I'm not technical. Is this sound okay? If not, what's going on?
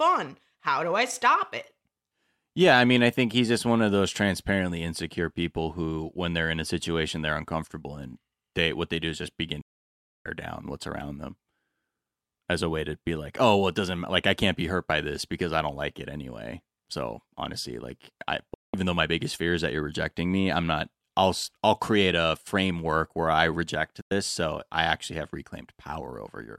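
No. There is a digital broadcast dropout three times. At 9.61 to 10.26 s, after "do is just begin", the speech cuts out for about two-thirds of a second and returns at "down what's around them". Shorter gaps follow at 18.54 s (about 0.2 s, after "honestly like I") and 24.01 s (about 0.1 s, after "framework where I reject"). The receiver stopped getting usable data and went silent until good data came back, so those moments are lost.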